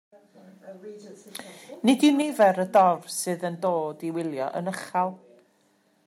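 From 1.88 to 2.07 s the speech takes on a harsh, crackling edge. This is microphone overload. The peaks likely ran about 2 dB past the converter's limit, and a small share of samples had their tops flattened. At 2.22 s the microphone volume is stepped down. Voice and background both drop by about 4 dB at once. The likely cause is the call software cutting the input gain after that distorted peak. Overload returns from 2.41 to 2.46 s, again about 2 dB over, with around one sample in twenty clipped. It is likely the same cause, the input still too hot for the converter. From 2.75 to 2.82 s it is worse. The peaks go about 4 dB over, and roughly 7 percent of samples are cut. This burst likely comes from the same overdriven input. It sounds rougher and more crackly. At 3.24 s the level steps down again by about 4 dB. The whole sound drops suddenly, likely because the software lowered the device volume once more.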